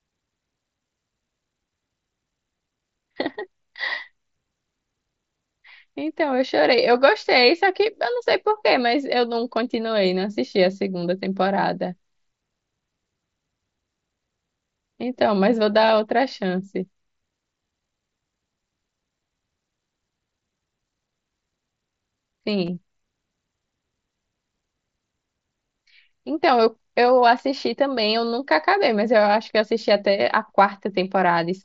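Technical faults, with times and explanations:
15.87 s and 22.66 s: concealed Bluetooth headset packet loss. Audio packets between headset and phone went missing, and the receiver filled each gap by repeating the best-matching stretch of the preceding waveform. The first gap lasts 7.5 ms, which fits a single lost mSBC frame. The second lasts 15 ms, which points to two frames in a row. The first gap is a single loss, so its patch is nearly hidden in the speech.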